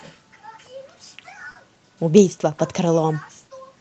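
A speech recording carries short concealed packet loss at 1.51 to 1.57 s: about 40 ms went missing and was filled by extending the preceding sound, giving a brief smear rather than the dead silence of a plain dropout.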